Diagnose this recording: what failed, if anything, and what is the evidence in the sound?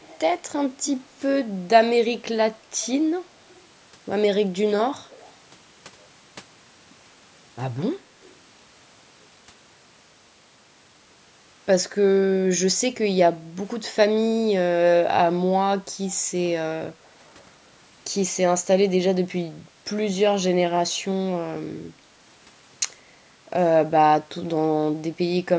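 Echo leak at 0.00–0.19 s, 0.84–1.07 s, 5.10–5.33 s and 8.22–8.35 s: a faint copy of the speech, far below the direct voice, trails it by 179 ms, likely from a far-end echo canceller passing residue in call processing. Room reverberation would be a smooth decaying tail, not this fixed-delay copy.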